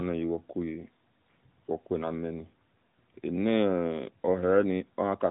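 Nothing is technically wrong with this speech clip; it carries no faults.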